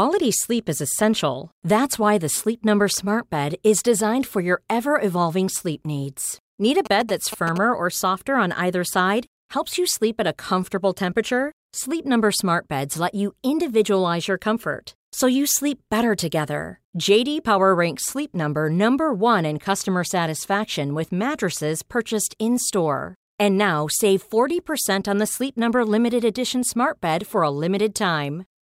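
GSM signalling bursts interrupt the speech from 6.86 to 7.58 s. A 2G phone close to the recording chain was signalling rather than carrying a call, so it sent short groups of radio bursts. The audio circuitry rectified them into the signal, producing a galloping dit-dit-dit of brief buzzes at the 216.7 Hz burst rate. The buzzing sits roughly 10 dB below the speech.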